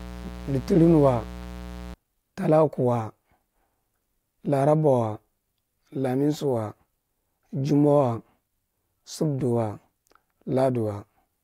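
From the start to 1.94 s there's a raspy mains buzz, 60 Hz harmonics from switching spikes leaking in, sitting fairly loud under the speech.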